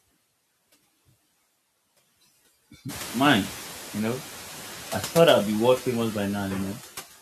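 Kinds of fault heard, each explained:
Noise suppressor artifacts: frame-by-frame attenuation drops the noise about 13 dB in gaps yet lets it return under speech, leaving a blotchy, pumping spectrogram floor.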